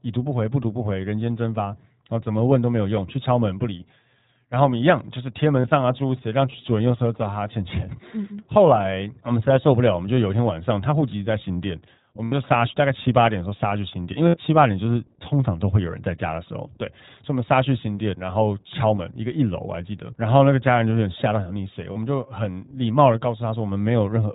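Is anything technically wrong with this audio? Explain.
Yes. The whole clip runs through the iLBC codec. It's band-limited to 4 kHz with a slightly rough, synthetic edge, which fits the 20 ms-frame, 15.2 kbps mode.

There are also lost iLBC frames at 5.60–5.66, 12.24–12.34, 14.28–14.37 and 21.92–21.97 s. Each gap is bridged by a repeated pitch cycle mixed with noise, so you hear a brief buzzy held vowel lasting roughly 40, 80, 60 and 40 ms.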